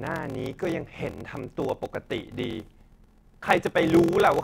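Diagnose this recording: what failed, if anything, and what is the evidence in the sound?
A steady buzz at about 43.1 Hz runs under the speech for the whole clip, and the delivery is dragged out, playing at about 0.861 of normal speed while the timbre stays where it should be. This is a block size mismatch (padded) at the driver or buffer stage. Each block written is shorter than the block read, which fits a 1024-sample read, and the shortfall is filled with silence. That inserts a gap in every block, producing the block-rate buzz and the slowdown.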